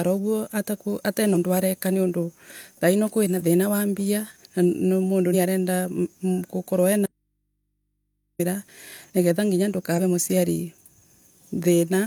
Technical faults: damaged data in a compressed stream; audio dropout to a faint residue

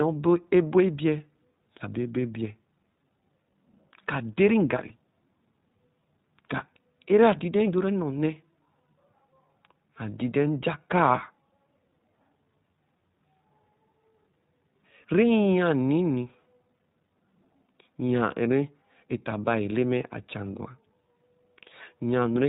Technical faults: iLBC codec; lost iLBC frames

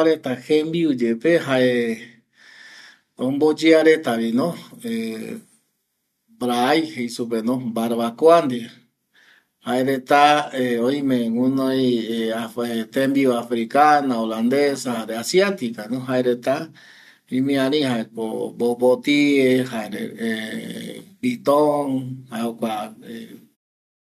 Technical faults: none

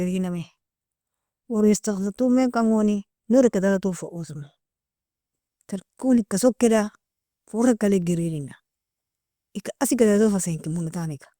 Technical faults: none

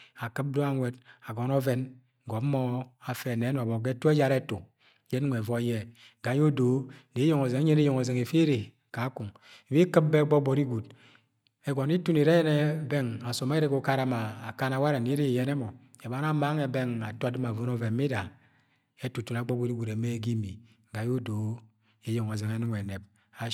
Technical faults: none

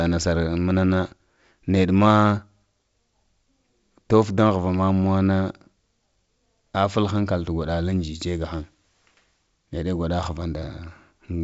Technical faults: none

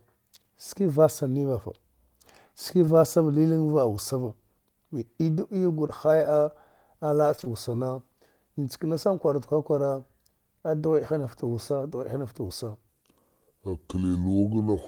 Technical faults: short concealed packet loss; section at the wrong speed

